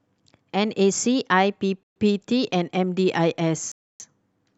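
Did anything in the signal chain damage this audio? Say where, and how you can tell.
Yes. The speech cuts to dead silence twice: from 1.83 to 1.96 s (127 ms) and from 3.72 to 4.0 s (283 ms). Each time it resumes abruptly. On a waveform these show as flat, silent gaps with hard edges. On a spectrogram they appear as blank full-band columns. This points to the wireless playback link, most likely a Bluetooth stall: interference held back packets, the headphone buffer ran empty, and output paused until resent data arrived.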